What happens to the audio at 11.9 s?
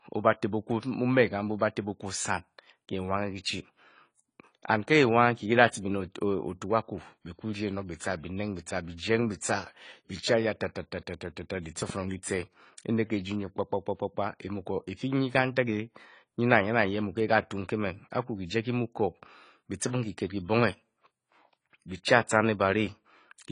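A loud pop occurs there: two sharp pops between 11.82 and 11.92 s, peaking roughly 5 dB above the surrounding speech, which continues underneath. The likely cause is a sudden voltage step or pulse, from a plug, a switch, static or a driver glitch, added to the signal and shaped by the circuitry after it. On a waveform they appear as two narrow spikes standing out from the speech; on a spectrogram, as two thin vertical broadband stripes.

Under the pops, as throughout the clip, the speech carries plainly audible AAC compression, with a character that fits AAC-LC at around 24 kbps. The encoder quantises its frequency lines coarsely against a hearing model and sheds detail, so nothing remains above 10 kHz. The result is dull and smeared, with a warbling, fizzy texture on sustained sounds and sibilants. A spectrogram shows a hard, flat ceiling at 10 kHz across the whole clip.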